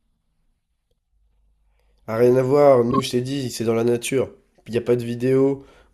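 Speech with a corrupt frame decoded between 2.91 and 3.00 s: a short, fairly loud burst lasting about 90 ms, which fits a few consecutive damaged frames. Flipped bits in the compressed data led the decoder to apply wrong gains and misread codes, scattering energy into unrelated frequencies. Unlike a dropout or concealed packet loss, which leaves a gap or smeared repeat, this adds new, foreign-sounding energy.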